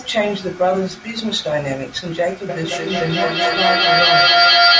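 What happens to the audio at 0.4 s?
Nothing goes wrong at 0.4 s: the speech runs on intact there, with only the expected trimming of the lowest bass and the band topping out at 8 kHz from the call microphone processing.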